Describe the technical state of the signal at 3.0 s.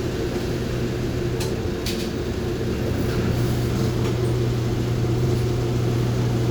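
At 3.0 s the signal is intact, with no audible dropout, clipping, distortion or other technical fault at that point.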